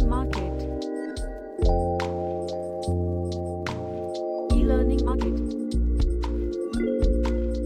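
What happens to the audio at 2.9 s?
Nothing goes wrong at 2.9 s; the audio runs through that moment intact, with no dropout, click or other fault.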